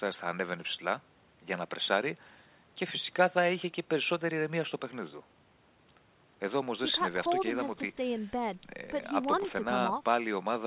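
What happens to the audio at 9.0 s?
Nothing goes wrong at 9.0 s: the speech carries on intact through the call path, with the narrow band of a G.711 link that leaves nothing above 4 kHz.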